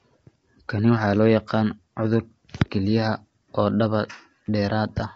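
From the first moment to the end, the speech has the rough, grainy texture of low-delay AAC compression, the kind video calls use. The likely cause is AAC-ELD running at a low rate, which fits something around 24 kbps. At that rate it can't spend enough bits to code the pitch harmonics cleanly, so noise fills the gaps between them and the damage is plainly audible. The top band is gone too, with nothing above 7.8 kHz.

From about 0.76 s to 4.98 s there's a run of faint, evenly spaced ticks, roughly seven of them, one every 0.7 s or so. These are clock slip clicks. Two devices are likely running on separate clocks that drift apart by something around 30 ppm, so each time the gap adds up to a whole sample, a single sample gets dropped or repeated. The steady spacing comes straight from that fixed clock mismatch.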